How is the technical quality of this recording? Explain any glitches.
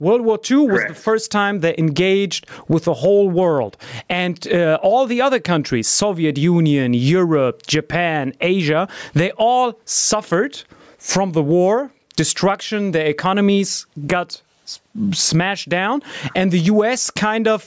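The main problem is gain pumping, and it runs through the whole speech clip. The level swings by roughly 20 dB. That's most likely the input gain set far too high, so a fast limiter or compressor clamps down on every peak and lets go in the gaps. Loud and quiet parts end up squashed together. The call-style microphone processing is audible too: the lowest bass is trimmed and nothing comes through above 8 kHz.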